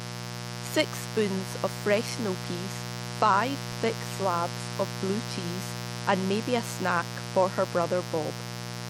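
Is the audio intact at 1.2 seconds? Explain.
No, not really. At 1.2 seconds the speech is sitting on top of a mains buzz that runs through the whole clip, so that moment is affected like every other. Something in the chain is letting sharp switching spikes from the 60 Hz supply leak in twice per cycle, which throws off a stack of harmonics up into the kilohertz range. You hear it as a steady, raspy buzz, and it's strong, only around 10 dB under the speech.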